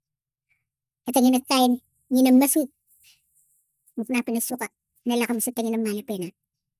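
From start to finish the speech sounds high and hurried, raised by about 6.45 semitones and running 1.45 times faster than normal, so the voice takes on a squeaky, rushed quality with no stretch at natural pitch. This is a wrong sample rate fault: the samples are played back faster than they were captured, with no conversion, so pitch and tempo rise together by the same ratio, which fits audio recorded at 22 kHz being played at 32 kHz.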